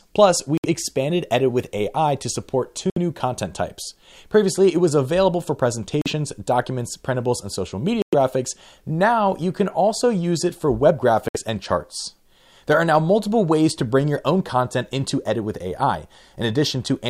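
The sound cuts out briefly at 0.58, 2.90, 6.02, 8.02 and 11.28 s. The gaps last about 40 to 110 ms and have hard edges or a fade of a few milliseconds. Playback resumes further along, as if it kept running. This is likely a Bluetooth dropout, with packets arriving too late.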